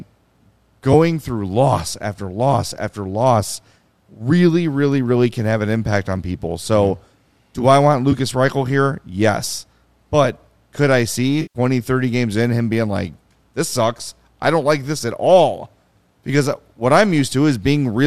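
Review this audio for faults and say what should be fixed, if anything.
AAC frame loss with concealment occurs three times in this speech. Short blips land at 0.93 s and 8.12 s. Each fits one lost 10 ms frame, patched from the previous spectrum, so it sounds smeared and phasey. A longer patch runs from 11.42 to 11.59 s. That fits about 13 lost frames, 130 ms in all, so the smearing lasts much longer. Forward error correction or a deeper jitter buffer on the link would prevent these losses.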